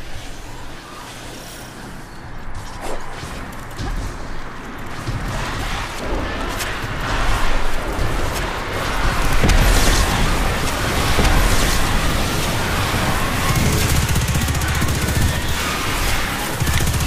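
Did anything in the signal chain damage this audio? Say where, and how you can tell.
Yes. From 4.90 s to 13.52 s a second copy of the sound runs about two seconds behind, roughly 5 dB lower, dry and full-band, cutting in and out abruptly. This doubled audio track likely comes from a slower second capture path or a misaligned edit.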